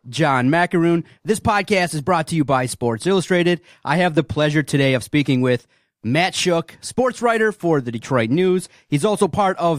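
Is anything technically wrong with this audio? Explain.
No, the speech signal is technically sound, with nothing wrong that a careful listen can pick up anywhere in the recording.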